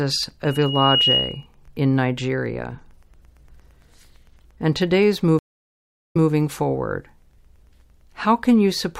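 From 0.45 to 1.46 s a loudspeaker feedback squeal rises out of the speech. It is a single tone at 2.9 kHz that swells over roughly half a second until it sits about 5 dB above the speech. The microphone was picking up the loudspeaker it fed, and at that frequency the gain around the loop exceeded one, so the tone fed on itself and kept growing.

At 5.39 s, just after "and today's", a stream reconnect cuts the audio. Roughly 0.71 s of silence follows, and the sound picks up again by 6.29 s. The connection dropped, and the player went quiet, re-established the link and started a new decoder partway through the stream. Playback resumes about 0.19 s earlier than where it broke off, so that short stretch is heard twice, which points to the server resending a burst of recent audio.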